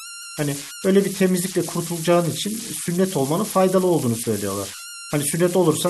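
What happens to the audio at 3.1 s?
At 3.1 s, converter idle tones persist throughout the speech: an undithered delta-sigma converter cycles through repeating bit patterns, producing a whistle near 1.5 kHz, about 11 dB below the signal. On a spectrogram it shows as a thin horizontal line.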